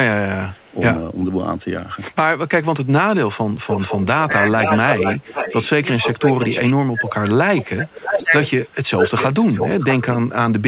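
Echo leak first appears from 0.53 to 0.79 s as a very faint copy trailing the speech by 378 ms. It returns much stronger, nearly as loud as the talker, from 3.69 to 5.69 s and 6.04 to 6.61 s at a 475 ms delay, more faintly and briefly at 7.08 to 7.13 s, and from 8.04 to 10.18 s at 628 ms. The likely cause is a far-end loudspeaker whose echo canceller let its microphone pickup return down the line. Speech suppressed in double talk occurs at 4.49 to 4.57 s (a drop of about 15 dB) and 5.96 to 6.03 s (about 10 dB). It then recurs in pieces across 6.68 to 8.32 s, totalling roughly a second, with dips as deep as about 20 dB. These dips most plausibly come from the canceller ducking the talker while trying to suppress that echo. Throughout, nothing is heard above 4 kHz, which fits a 64 kbps G.711 call path.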